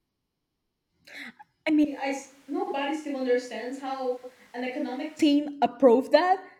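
From 1.85 s to 5.19 s the speech turns suddenly roomy and hollow, thinner in the bass, roughly ten decibels quieter, with background noise about 30 dB below it. It snaps back just as abruptly. This is likely a switch to a distant microphone after the close one dropped out.

Inside that stretch, from 2.63 s to 2.73 s and again from 4.17 s to 4.30 s, the sound briefly garbles into a flutter. These are frames out of order: two adjacent blocks were decoded swapped, about 42.7 ms each the first time, fitting two-frame blocks, and 64.0 ms each the second, fitting three-frame blocks. No time is lost.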